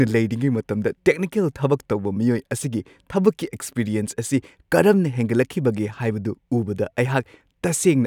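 Nothing in the recording trips any alarm: the speech runs along without a single dropout, click, glitch or other technical hiccup to point to.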